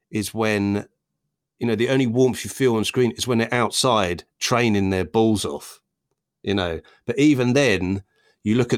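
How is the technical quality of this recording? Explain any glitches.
Nothing in the recording stood out as a technical problem on listening, so there are no glitches to explain.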